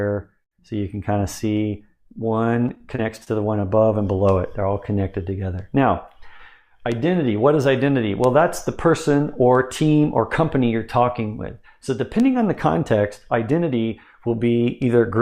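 From 2.35 to 3.64 s the audio turns choppy: this is repeated packet loss. Seven short gaps arrive in quick succession, the longest about 26 ms. Each is patched by stretching the preceding sound, about 111 ms of fill in all, which covers roughly 9% of the stretch, and a further 40 ms simply drops out. A single dropout leaves one clean hole; here the repeated patches chop up the sound, leaving pieces missing.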